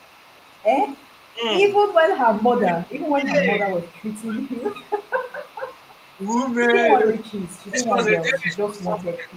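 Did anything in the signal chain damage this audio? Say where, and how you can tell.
Yes, in the call processing stage. There is an echo leak from 0.0 to 7.71 s and again from 8.24 to 9.37 s: a faint, discrete copy of the speech trails the original by a steady 412 ms, roughly 30 dB down. The likely cause is a far-end loudspeaker whose echo canceller let some of the microphone pickup through. Room reverberation would smear continuously from the first instant. This is a single repeat at a fixed lag.

The speech is also suppressed in double talk at 1.32 to 1.43 s, 2.32 to 4.78 s, 5.59 to 6.2 s and 7.71 to 9.29 s. The level dips by around 15 to 20 dB. The likely cause is the canceller ducking both its own talker and the loudspeaker echo while both ends spoke at once. Packet loss would produce abrupt gaps or concealment artefacts. These are graded, longer attenuations that track overlapping talk.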